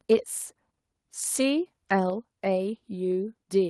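From 0.11 to 0.14 s there is microphone overload, likely from the input gain being set too high, so the speech peaks run about 2 dB past the converter's ceiling. Around a tenth of the samples are flattened, which puts a harsh, crackling edge on that burst. At 0.14 s, right after that distorted peak, the microphone volume steps down, likely because the call software reacted to the clipping by cutting the device's input gain. The speech and the background both drop by about 3 dB at once.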